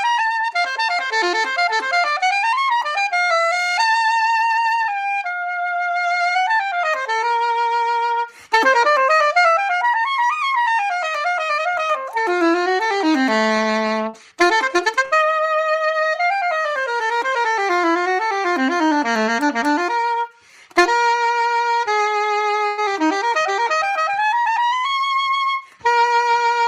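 Short concealed packet loss at 14.09 to 14.15 s: about 40 ms never arrived, and the receiver extended the preceding sound to cover it, leaving a brief smear.

Burst of packet loss at 15.05 to 15.13 s and 22.67 to 22.79 s: runs of roughly 60 ms and 100 ms went missing. Each gap is bridged by a fading continuation before the sound resumes further on.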